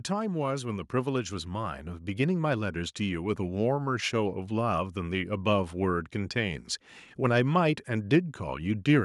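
From 0.48 s to 3.01 s the level climbs steadily by about 5 dB, an automatic gain rising fault: the gain control judged the input too quiet and ramped its gain up, so the speech and the background noise swell together over roughly two and a half seconds.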